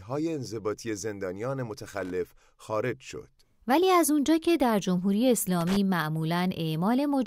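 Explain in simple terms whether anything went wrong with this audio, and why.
Loose connector crackle appears twice in this speech clip, from 1.94 to 2.10 s and again from 5.61 to 5.76 s, each a short burst of scratchy crackling lasting about a sixth of a second. It happens when a worn or dirty plug or socket shifts and its metal contacts rapidly lose and regain touch. That chops the signal into ragged fragments, and any DC on the line adds pops, giving an uneven, gritty burst.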